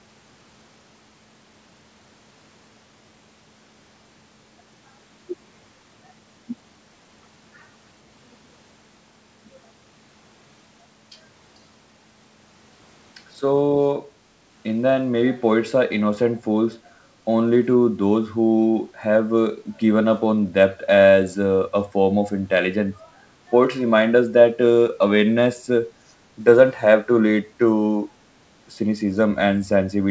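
At 26.08 to 26.13 s, a brief echo leak: a very faint copy of the speech returns about 440 ms late, likely from incomplete echo cancellation, visible as a weak repeated smear on the spectrogram.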